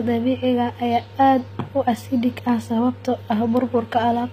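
From start to finish the speech's upper range sounds gritty and synthetic, with sibilants turned metallic and nothing above 15.5 kHz. The likely cause is HE-AAC compression at a low bitrate, around 24 kbps, where treble is rebuilt from copied lower bands rather than coded.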